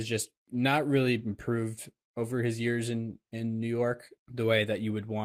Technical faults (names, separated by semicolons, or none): lost packet rebuilt from error correction